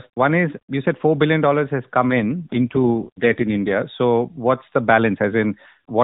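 Speech carried over an AMR narrowband mobile link shows an AMR rate drop from 2.10 to 3.82 s, just after "billion has come": the codec switches to a lower mode, which fits a fall from 12.2 to 4.75 kbps. The band stays capped at 4 kHz and nothing drops out, but the voice turns buzzy and synthetic until the rate recovers.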